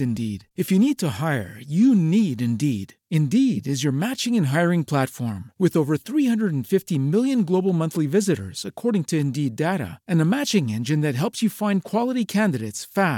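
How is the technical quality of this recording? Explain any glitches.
No glitches or technical faults can be heard anywhere in the speech recording.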